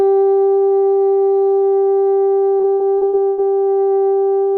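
Repeated packet loss (robotic sound) runs from 2.57 to 3.40 s in the music. Six successive gaps, the longest 107 ms, were patched by extending the preceding sound, so about 35% of the stretch is concealed, leaving a choppy texture with pieces missing.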